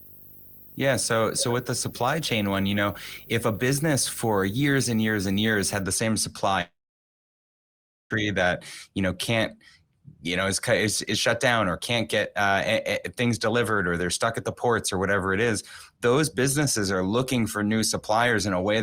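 A speech recording with two separate faults. From the start to 5.82 s there is video or display buzz: a 50 Hz field-rate buzz with hash above it and a 15.6 kHz line tone, roughly 20 dB below the speech, from a screen or video cable coupling into the audio path. From 6.61 to 8.11 s comes a long network dropout. The last sound briefly continues and fades, then goes silent for about 1.38 s. About 1.49 s of audio never arrived, most likely lost in transit, and the speech resumes past the gap.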